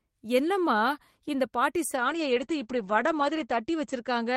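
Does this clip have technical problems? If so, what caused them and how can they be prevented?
Yes. A call bitrate drop starts at 1.96 s, right after "என்னம்மா இந்த பாட்டி", and lasts to the end. The encoder falls from 32 to 10 kbps, so the audio turns coarse and muffled as the bandwidth narrows from 20 kHz to 8 kHz. It stays at its lowest for about 1.37 s. Keeping a stable network path or setting a higher minimum encoder bitrate would prevent this.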